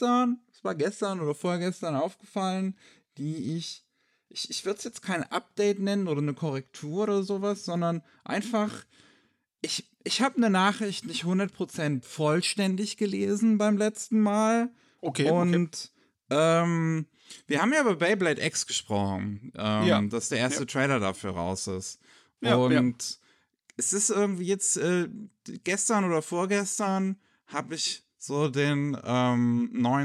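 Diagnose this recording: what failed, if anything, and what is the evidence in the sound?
Listening through the speech, nothing stood out as a failure at any stage of the recording chain.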